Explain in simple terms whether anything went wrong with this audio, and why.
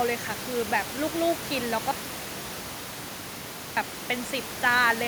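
At 1.91 s the speech cuts out abruptly, leaving just a faint hiss until it comes back at 3.77 s. That's an audio dropout to a faint residue. The signal was likely lost while the rest of the chain stayed live, so you hear hiss instead of silence.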